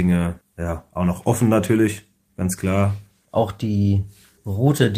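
No technical faults can be heard anywhere in the recording: the signal stays continuous and steady throughout, with nothing interrupting or disturbing it.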